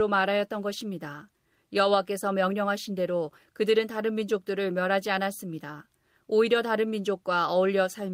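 Nothing stood out on listening to the speech in this recording.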